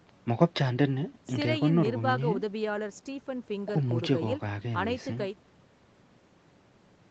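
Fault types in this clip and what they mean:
No faults can be heard in this speech.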